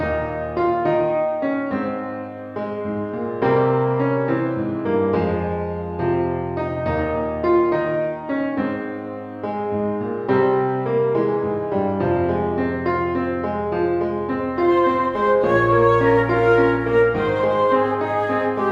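No dropouts, clicks, distortion or level jumps are audible anywhere in the recording.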